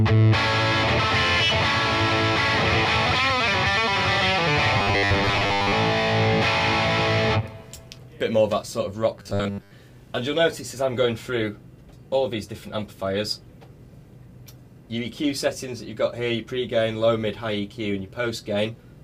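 From 4.78 to 5.73 s and again from 9.18 to 9.71 s, the sound collapses into a rigid metallic buzz at 100 Hz, robotic sound from repeated short buffers, likely from a 10 ms chunk replayed over most of each span. Unlike plain dropouts, nothing goes silent.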